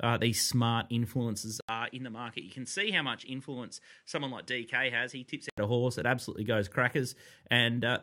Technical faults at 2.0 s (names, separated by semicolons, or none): input switched to a poorer device